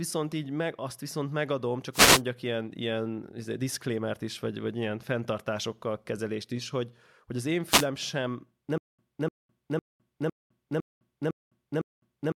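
At 1.92 to 2.22 s and again at 7.65 to 7.87 s, a wireless microphone noise hit occurs. The FM radio link fades, and receiver noise rises into a brief swish of static over the speech.

From 8.78 s to the end, a stutter with silent gaps follows, likely from a stalled player retrying. A 298 ms fragment repeats seven times, each followed by about 208 ms of silence, and the intended audio is lost.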